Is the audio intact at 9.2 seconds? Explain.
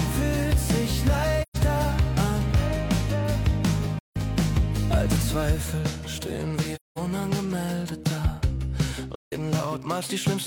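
No. From 9.15 to 9.33 s there is AAC frame loss with muting, a gap of about 170 ms that fits four lost frames. The decoder zeroed their spectrum, so overlapping windows fade the sound out and back in. This gives a soft-edged hole, not the abrupt, clicky cut of a plain dropout.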